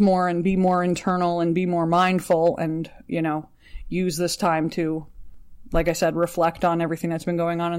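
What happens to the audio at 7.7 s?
Nothing goes wrong at 7.7 s; the speech plays through that point intact, with no fault.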